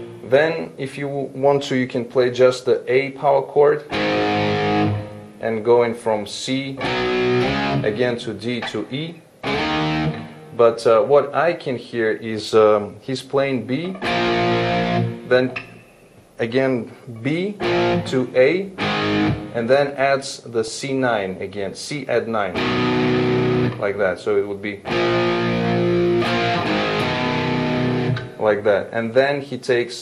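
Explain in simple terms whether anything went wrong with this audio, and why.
Throughout, the sound is dull and plainly gurgling or grainy, most likely from MP2 compression starving the upper frequencies, a grainy roughness rather than simple smooth muffling.

From 20.68 to 20.73 s a brief burst of noise blips pops out. That is DAB burbling: reception errors corrupt a few compressed frames, causing a sudden blip instead of steady dullness.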